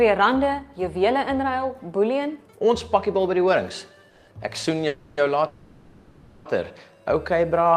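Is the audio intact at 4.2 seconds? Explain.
No. From 4.09 to 4.29 s there is a call audio freeze: about 180 ms is filled with a fading buzzy continuation of the preceding sound, likely from delayed packets emptying the jitter buffer. Nothing is lost, but later audio arrives 180 ms late. A spectrogram shows smeared, fading horizontal bands, not silence.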